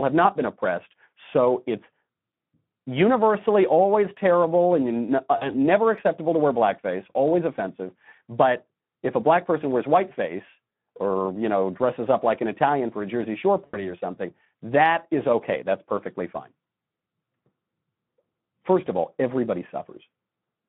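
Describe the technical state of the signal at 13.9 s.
At 13.9 s the signal is near the end of a stretch of VoIP packet loss concealed by the speech codec, running from 13.66 to 13.92 s. The decoder bridged the gap by repeating its last pitch and filter at falling gain. The result is a fading buzzy tone or coloured noise, with the voice still weak or distorted as it recovers into "something that is okay". The gap sounds like about 80 ms of lost audio.

The whole clip also carries plainly audible Speex codec damage. The sound is hoarse and noisy, which fits a low bitrate of around 11 kbps. The band is confined to roughly 150 Hz to 3.5 kHz.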